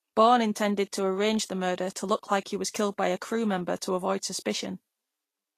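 Speech with Vorbis compression damage throughout. Nothing sounds above 14.2 kHz, and the treble is hissy and grainy. That likely points to a low bitrate, around 36 kbps.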